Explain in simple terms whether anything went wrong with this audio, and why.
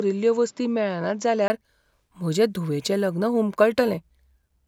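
For the first 1.5 seconds the speech sounds duller, a bit quieter, and carries a faint background hiss, with nothing above about 7.6 kHz. At 1.5 s a 20 ms gap of silence falls, and the sound suddenly opens up. The likely cause is an input switched to a poorer device. A simple tone filter would only dull the sound, but here the loudness, the hiss and the brightness all change together at one instant.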